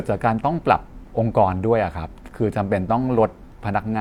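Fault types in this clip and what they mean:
No technical fault can be heard anywhere in this speech recording.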